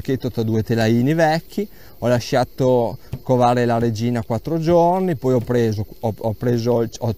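No technical faults can be heard in this audio.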